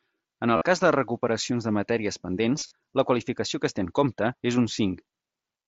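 At 0.57 to 0.62 s, just before "cas de recuperacions de", there's concealed Bluetooth headset packet loss. About 45 ms of speech went missing and got patched by repeating the last bit of waveform, which comes across as a short buzz. It happens again from 2.56 to 2.71 s, after "de recuperacions de matèries", with gaps scattered over 150 ms and a slight warble before "la qualificació que es". All of this rides on the mSBC headset link.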